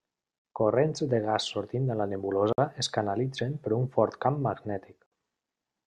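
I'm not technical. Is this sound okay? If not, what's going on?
No. The speech was encoded in separate pieces and joined without trimming the encoder's built-in padding, causing a gap at a join of encoded pieces: brief silences of about 50–60 ms at 0.39 s, 2.53 s (between "gas sortint de la" and "es canalitzen per un") and 5.06 s.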